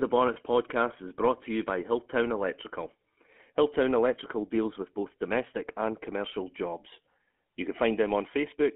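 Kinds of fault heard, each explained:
GSM full-rate codec: The whole clip is speech passed through the original GSM full-rate coder, which fits its 13 kbps rate. The coder models the vocal tract as a filter. It then drives that filter with a sparse train of regular pulses instead of the true signal. Nothing survives outside roughly 200 Hz to 3.4 kHz. The damage is plainly audible as a buzzy, gravelly roughness laid over all of the speech.
lost GSM frames: At 0.34 to 0.37 s, just before "podcast is brought to", a short dropout was covered over. The decoder had no good data for that stretch. It reused the filter and pulse settings from the last good frame and repeated them. The gap is brief and points to a single lost 20 ms frame. It comes through as a quick, rough, metallic smear rather than silence.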